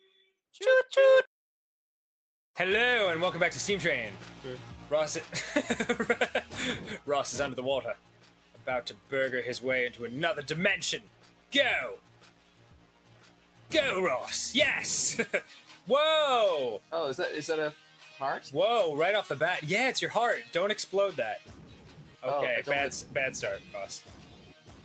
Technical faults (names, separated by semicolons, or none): noise suppressor applied to music or sounds; sound cut by the noise suppressor